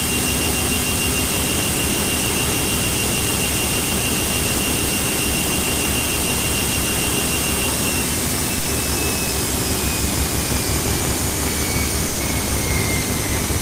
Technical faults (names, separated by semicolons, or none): buffer tearing; sound dropped by the voice detector